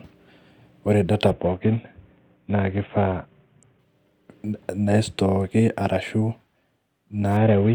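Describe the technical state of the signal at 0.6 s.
At 0.6 s the signal is intact, with no audible fault in the speech at that moment.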